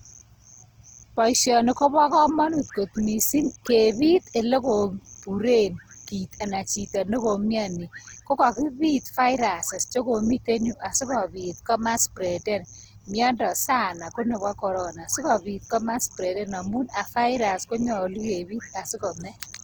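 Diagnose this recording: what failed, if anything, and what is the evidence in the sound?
The codec stage is at fault: Opus compression runs through the whole speech clip, and the damage is plainly audible. The voice has a grainy, rough, noisy texture rather than the swirling holes of MP3, and content still reaches about 20.4 kHz, so the bandwidth has not narrowed. This is likely the music (CELT) mode at a rate near 16 kbps, where starved bands are filled by folding and noise, turning tonal detail into grit.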